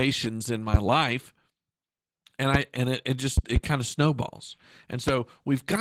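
Opus voice compression runs throughout: the speech sounds muffled, hoarse and slightly robotic, typical of hybrid SILK and CELT coding starved of bits, which fits roughly 16 kbps. Loud pops, likely voltage spikes from a plug, switch or driver glitch, crack well above the speech at 2.54–2.58 s before "and it it", as a double pop at 3.38–3.59 s before "kind of snowballs", and at 5.08–5.12 s after it.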